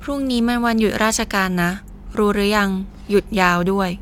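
No technical faults can be heard in this speech.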